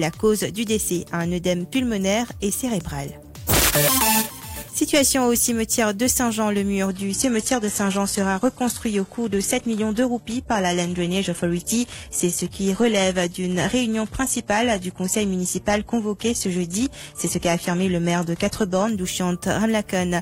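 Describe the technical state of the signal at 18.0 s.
An adaptive stream at a lower bitrate runs from 6.89 to 18.89 s. The player has dropped to a thinner rendition, which fits a 16 kbit/s HE-AAC stream. Nothing sounds above about 12.3 kHz, and the treble turns synthetic with audible codec artefacts, switching abruptly without any gap.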